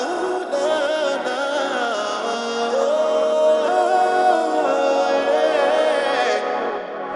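No technical faults are audible anywhere in this audio.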